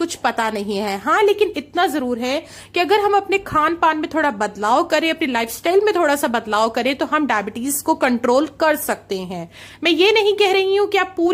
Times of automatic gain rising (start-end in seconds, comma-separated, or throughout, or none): none